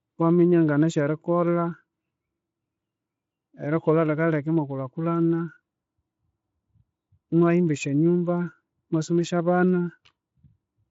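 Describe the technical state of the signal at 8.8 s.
At 8.8 s the speech is intact, carried by a Speex path at a high bitrate whose band stops near 7.6 kHz, with no fault at that moment.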